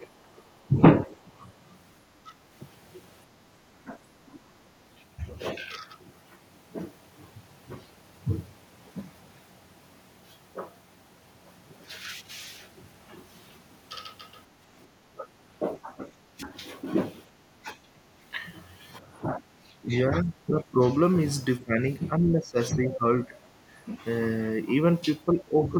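Speech that repeatedly sinks and breaks up: the talker's level dips by roughly 10 to 20 dB and thins or drops out in fragments during 0.0 to 2.33 s, 3.84 to 4.53 s, 15.07 to 16.57 s, 17.62 to 18.01 s, 19.0 to 23.36 s and 25.33 to 25.74 s. The longest stretch, from 19.0 s, loses about two seconds in pieces. This is likely speech suppressed in double talk: with both ends speaking at once, the echo canceller could not tell the local talker from loudspeaker echo and attenuated everything. Around 22.88 to 22.94 s, a brief scrap of a second voice pokes through, roughly 15 dB below the speech. That is likely the other side's voice leaking through, residual loudspeaker echo the canceller failed to remove from the microphone signal.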